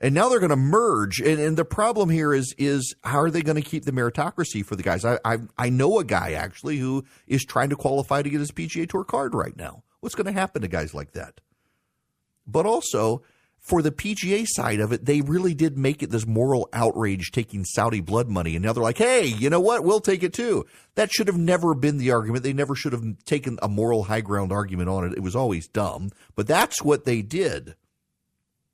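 No technical faults are audible anywhere in this speech.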